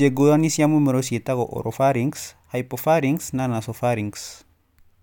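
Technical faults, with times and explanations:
No technical faults heard.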